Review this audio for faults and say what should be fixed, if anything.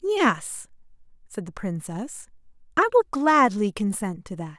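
No faults found, so nothing needs fixing.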